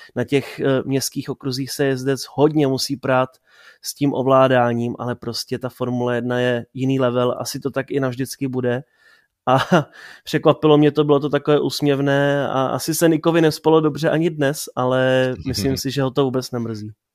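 No technical faults can be heard in this speech clip.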